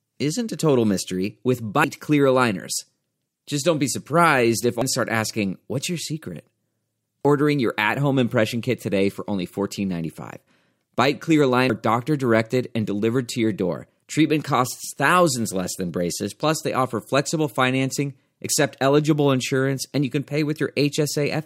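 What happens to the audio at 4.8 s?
At 4.82 to 4.85 s the speech is broken by a short burst of damaged data in a compressed stream, lasting roughly 30 ms. Part of the encoded stream arriving at that point is corrupt, so the decoder misreads those frames, loses synchronisation and hunts for the next valid frame header before resuming. For that brief span, the damaged frames come out as a chirp, squawk, click or short hole in the sound.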